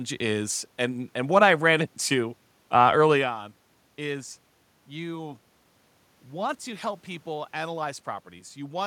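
A speech recording with no technical faults. Some background noise from the room is audible, and around three seconds in the voice changes in level as the talker shifts position relative to the microphone.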